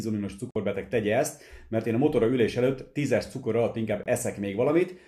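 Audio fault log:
0.51–0.56 s and 4.03–4.06 s, digital broadcast dropout: the sound mutes abruptly for about 48 ms, then about 24 ms, which fits two lost frames and then one of roughly 24 ms each. The receiver silenced corrupt or missing frames, so that content is gone.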